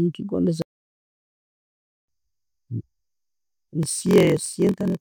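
The player most likely ran short of data or had its output thread held up, which produced a playback stall from 0.62 s to 2.08 s. The speech cuts off mid-flow and the output falls completely silent for about 1.46 s, far longer than any natural pause. It then resumes, so the stall is heard as a sudden dead gap in the middle of the speech.

From 3.81 s to the end of the clip, one stage hands over shorter blocks than the next stage reads, and each block is padded out with zeros. This block size mismatch (padded) inserts a brief gap in every block, which fits a 1024-sample read block. The repeated gaps produce a buzz at 43.1 Hz over the speech. The speech also runs slower, at 0.938 times normal speed, while its timbre stays the same.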